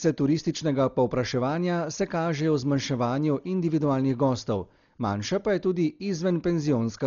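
Throughout the speech nothing reaches above 7 kHz, so it sounds dull, with rough, fluttering noise around tones. The likely cause is heavy Dolby Digital compression at a rate that fits about 40 kbps. Unlike a plain low-pass filter, it refills bit-starved frequency lines with dither noise.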